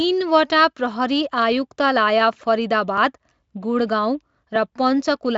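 At 2.98 s the speech jumps forward slightly, and at 4.56 s there's a second jump with a slightly larger skip. Both are likely dropped buffers (overrun): the software didn't fetch its samples before the hardware overwrote them, so a slice vanished and the audio on either side was spliced together with no gap. The first loses a millisecond or two, the second a few milliseconds. The Speex-coded speech underneath shows only faint coding damage and stops at about 7.7 kHz.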